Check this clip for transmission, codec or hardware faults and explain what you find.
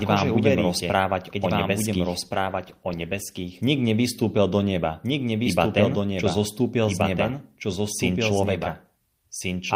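Two faults are present.

Throughout the speech, a second full-band copy trails about a second and a half behind, roughly 5 dB quieter and without any room decay. This doubled audio track is likely from a second capture path or an out-of-step edit.

From 2.26 s to 5.01 s, the speech turns rough and watery. This is a call bitrate drop: the encoder fell from 48 to 17 kbps, bottoming out for about 1.19 s, so it coded far more coarsely.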